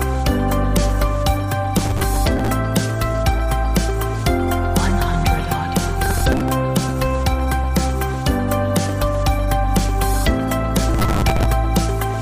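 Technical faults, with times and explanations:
1.78–2.48 s, 6.06–6.51 s and 10.94–11.45 s: processor overload crackle. In each burst the processor repeatedly fails to deliver its small audio buffers on time, which fits buffers of around 5 ms. Each missed deadline replays a fragment of old audio with hard edges. Dozens of misses in a row, fewer in the shorter middle burst, fuse into a gritty tearing crackle over the sound that stops as soon as the load eases.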